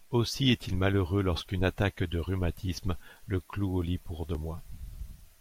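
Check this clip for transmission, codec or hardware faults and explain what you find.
Two repeated-buffer faults occur in the speech, at 1.49 s and 4.35 s. Each time new audio arrived late, so the device replayed its last piece of about 2.7 ms, which fits a 128-sample buffer. At 1.49 s it sounds three times in a row, and at 4.35 s twice, with hard joins that come across as a brief click or buzz rather than a stutter. Unlike a dropout, there is no gap of silence and no audio goes missing.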